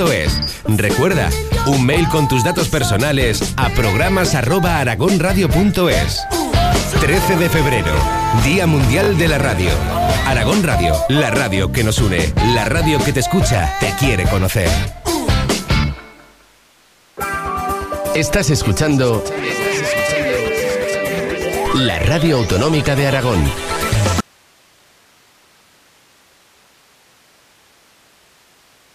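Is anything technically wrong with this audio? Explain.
Yes, there are two faults. At 9.04 to 9.08 s there is a repeated buffer: a 20 ms piece plays three times with hard joins, a quick stutter as playback waits for new audio. Unlike a dropout, nothing goes silent and almost nothing is lost. From 24.2 s to the end there is an audio dropout to a faint residue. The sound cuts off abruptly, leaving only hiss roughly 35 dB below the signal, likely because the source was lost while the path after it stayed live. A fade would taper off, but this break is instant.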